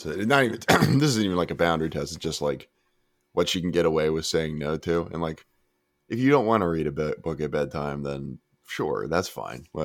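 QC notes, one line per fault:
Nothing stood out on listening to the speech in this clip.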